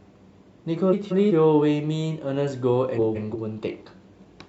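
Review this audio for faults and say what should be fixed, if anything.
There are two spots with frames out of order: 0.93 to 1.32 s and 2.96 to 3.36 s. In each, two neighbouring chunks of about 186 ms got swapped, which fits runs of roughly four frames, so the speech flutters oddly. Nothing's actually missing; it's just in the wrong order. Fix it by having the receiver reorder frames by sequence number before decoding.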